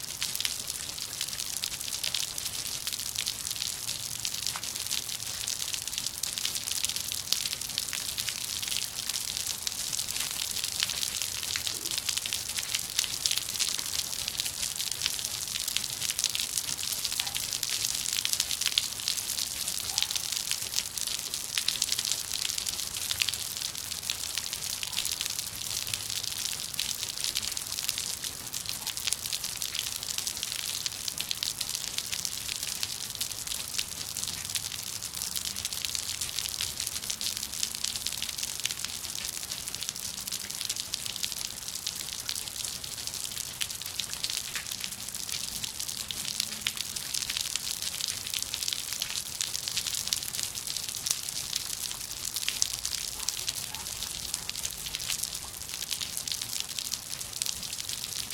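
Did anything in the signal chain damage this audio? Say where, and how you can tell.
Yes: dropped buffers (overrun) at 2.71 s, 4.03 s and 49.86 s, in the driver or buffer stage. Each is a point where the sound jumps forward with no gap of silence. The ones at 2.71 s and 49.86 s skip a couple of hundredths of a second, and the one at 4.03 s skips nearer a tenth. The likely cause is the capture software falling behind, so the hardware overwrote unread samples and the audio on either side was spliced together.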